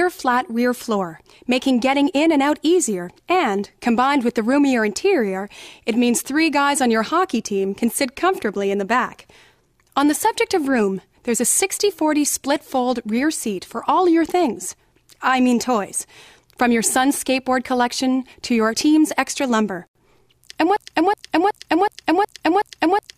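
From 20.77 s to the end, the same 0.37 s fragment of sound repeats exactly, back to back, seven times, in a broken-record loop. The player, encoder or stream likely stalled and kept resending its last held piece, so the audio meant for that stretch is lost.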